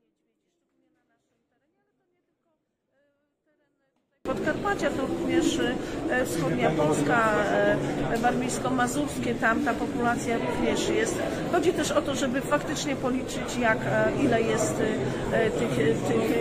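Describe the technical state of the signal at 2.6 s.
At 2.6 s the signal sits inside a 24-bit alignment error (too quiet), running from 0.0 to 4.26 s. The samples were written as 24-bit integers in the low bytes of a 32-bit word but read as full 32-bit values, so everything lands about 48 dB down. The sound stays clean yet is barely audible. On a waveform it shows as a nearly flat trace. A spectrogram keeps the same shapes, drawn very faintly.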